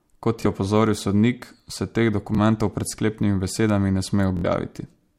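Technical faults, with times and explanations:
0.42–0.46 s, Bluetooth stutter: A slice of about 23 ms repeats as the receiver replays its last buffer. It fits one lost packet. Sound then jumps ahead.
2.35–2.38 s, Bluetooth stutter: A brief doubled blip. One late packet left a gap of about 23 ms. The receiver filled it by repeating its previous slice.
4.37–4.45 s, Bluetooth stutter: A short machine-gun buzz. About 70 ms went missing, fitting three lost packets. The same slice loops until new data resumes the sound further on.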